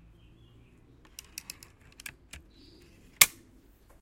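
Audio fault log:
No faults detected in this recording of sounds.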